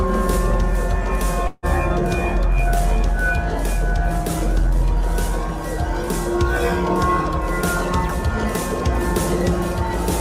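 At 1.47 to 1.66 s the sound smears into a fading buzz, briefly drops to silence, then resumes with about 160 ms skipped, likely a long network dropout.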